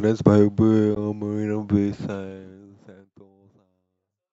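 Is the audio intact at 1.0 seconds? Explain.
No. A Bluetooth dropout cuts the speech from 0.95 to 0.98 s, just before the 1.0 s mark. The gap is short, about 15 ms of missing audio, which fits a single lost packet, and it likely comes from that packet failing to reach the headphones in time, so the output fell silent until good data arrived. It sounds like a brief hole with hard or very quickly faded edges, and the speech resumes further along, as if it had kept playing.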